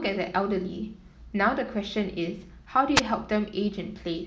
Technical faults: wireless microphone noise hit

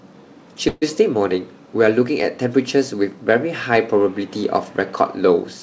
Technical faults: call audio freeze

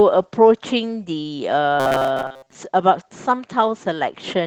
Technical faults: Opus voice compression; robotic sound from repeated short buffers

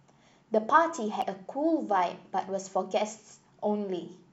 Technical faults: damaged data in a compressed stream

